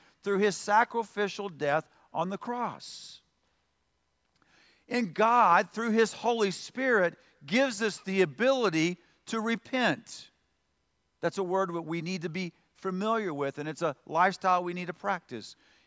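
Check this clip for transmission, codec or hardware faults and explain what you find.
Nothing turns up here: the speech comes through with no transmission, codec or hardware trouble to point to.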